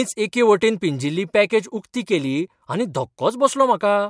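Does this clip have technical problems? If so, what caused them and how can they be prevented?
No, there's nothing technically wrong to hear in this bit of speech, so there's no cause to track down and nothing that needs preventing.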